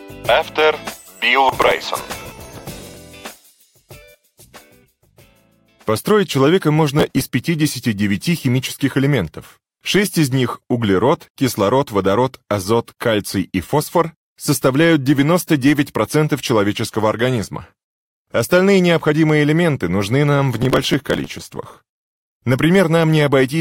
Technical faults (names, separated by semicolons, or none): processor overload crackle